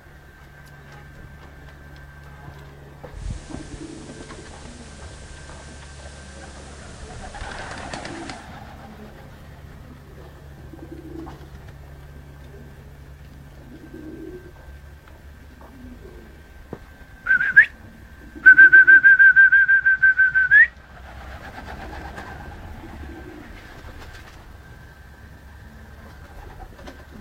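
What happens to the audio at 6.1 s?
The sound at 6.1 s is hissy, with a hiss roughly 25 dB down and a level shift of about 1 dB. This is digital radio blending to analogue: a 164 ms cross-fade to the FM broadcast, lasting from 3.10 to 8.5 s.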